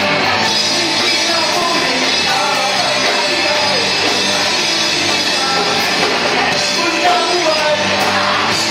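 The audio skips twice, at 1.62 s and 7.60 s. Each time a few milliseconds of sound vanish, and the two sides are butted together with no gap of silence. The pattern points to audio missing between chunks. The likely cause is a recorder or processor handling the signal in 2-second blocks and dropping a sliver at a block boundary. The two skips sit 6 s apart, a whole number of chunks.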